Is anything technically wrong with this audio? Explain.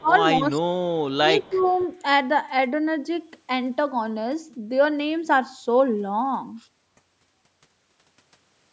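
Yes. Speech suppressed in double talk occurs at 0.00 to 0.15 s (the level drops by about 20 dB), 0.39 to 0.67 s and 1.43 to 1.70 s (about 10 dB). The voice ducks while the far side is likely talking over it. This differs from a dropout because the sound is attenuated, not gone. The canceller, unable to separate talker from loudspeaker echo, pulls both down.

An echo leak runs from 1.41 to 1.87 s. A faint copy of the voice trails 266 ms behind it at about 30 dB below the speech. It likely comes from a loudspeaker whose canceller let residual echo back. The fixed delay and its quietness separate it from room reverberation, which blurs instead of repeating. The band stops at 8 kHz, as call microphone processing would leave it.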